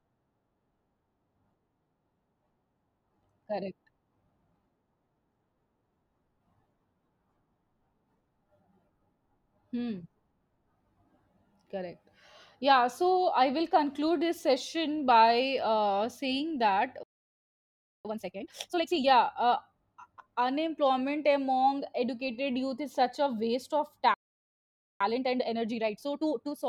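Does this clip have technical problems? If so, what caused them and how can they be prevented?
Yes. There's a playback stall at 17.03 s, right after "by uh saying that", with about 1 s of silence, and another from 24.14 to 25.01 s; the player likely starved or got blocked. Time-compressed catch-up follows each one, from 18.05 to 19.05 s at double speed up to "yeah uh", then 25.01 to 26.63 s at 1.5x, hurried but at normal pitch as chunks get spliced out. A deeper jitter buffer and a playback thread that nothing else can block would prevent both.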